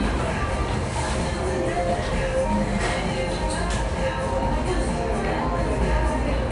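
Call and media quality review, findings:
4-bit ADPCM compression, whole clip. Encoder stores each sample as a coarse 4-bit step from a prediction, which fits a stream of about 89 kbps. The resulting gritty hiss rides on every loud passage and tracks its level, with harsh distortion on sharp attacks where the adaptive step lags. The damage is plainly audible. Band empty above about 10.6 kHz, suggesting a low sample rate near 22 kHz, so the sound is also dull.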